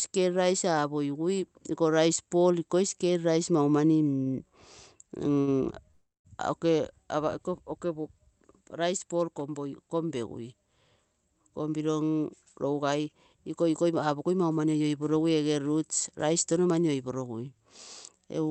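At 4.23, 5.34 and 5.40 s, a short stall from a late packet holds the speech for 30, 21 and 72 ms while the jitter buffer waits, leaving a brief drawn-out sound. From 5.91 to 6.27 s, a call audio freeze stretches the last sound into a fading buzz, then about 200 ms of silence, adding 335 ms, likely from packets held up in transit. From 11.49 to 14.80 s, a jitter buffer speed-up trims pitch-period slices to shed around 0.3 s, running at 109% with unchanged pitch. After "roots rice touno", it repeats from 16.67 to 17.22 s at 113%, sounding hurried.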